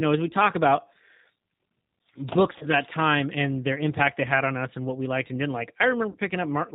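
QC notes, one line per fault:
Throughout, G.729 codec: The speech has passed through a low-bitrate CELP coder, which fits an 8 kbit/s G.729A stream. Each 10 ms frame is rebuilt from a vocal tract filter, a pitch predictor and a few pulses. That leaves the speech plainly rough and synthetic. Nothing above 4 kHz survives, so sibilants and breath sound dull and clipped off.
2.58 to 2.66 s and 6.11 to 6.16 s, VoIP packet loss concealed by the speech codec: About 30 ms of audio went missing each time, which points to a single lost packet. The decoder filled each gap by extending its last pitch and filter settings at falling gain, giving a brief stretched sound that fades. Because each frame builds on the one before it, the speech stays weak or distorted going into "that time and their" and just after "liked and didn't like".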